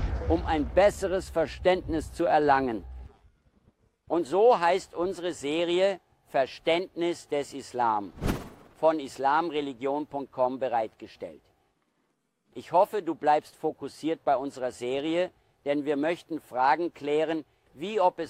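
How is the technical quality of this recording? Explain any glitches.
No glitches or technical faults can be heard anywhere in the recording, and the signal stays steady and intact throughout.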